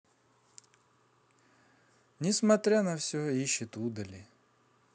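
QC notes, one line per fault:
No faults found in this speech clip. Nothing needs flagging.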